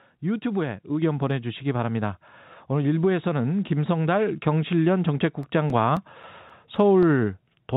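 At 1.02 s the speech and the background jump up together by about 3 dB, then again by about 2 dB at 4.32 s. This is a microphone volume stepped up: the call software judged the input too quiet and raised the device gain in single steps. From 5.43 s to 7.03 s seven ticks of uneven strength recur, roughly four or five per second, the longest lasting only a few milliseconds. These are CD scratch ticks, where a blemish passing on each disc revolution ruins more data than error correction can rebuild, so the player patches or mutes those samples. Throughout the clip, nothing above 4 kHz comes through the call path.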